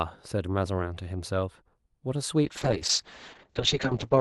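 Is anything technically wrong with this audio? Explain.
Yes. From 2.45 s to the end there is a call bitrate drop: the call's bandwidth estimate fell and the Opus encoder was starved of bits. The sound points to a fall from around 64 kbps to roughly 7 kbps, held at its lowest for the final 1.66 s. The audio turns coarse and watery, and its top end narrows from 12 kHz to 8 kHz, so the speech goes duller.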